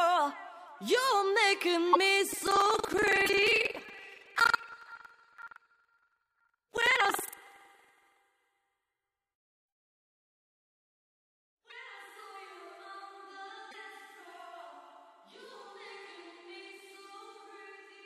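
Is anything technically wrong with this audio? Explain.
Yes. At 1.92, 3.25, 11.69 and 13.70 s, the audio jumps ahead with a brief chirp, noise burst or short hole, most likely a broken MP3 bit reservoir where dropped 26.1 ms frames left later frames decoding foreign bytes, seen as smeared broadband smudges on a spectrogram.

From 2.29 to 8.18 s, buffer tearing gives a 21.5 Hz rattle, which fits a 2048-sample buffer. Roughly a fifth of each period replays audio about 100 ms old, and the hard joins show as regular waveform discontinuities and vertical spectrogram lines.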